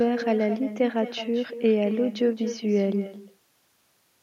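Throughout the speech, an echo with no canceller trails each phrase by about a fifth of a second, roughly 12 dB below the direct sound. The far end's loudspeaker output re-enters its microphone unsuppressed, returning a thinner copy after the network round trip.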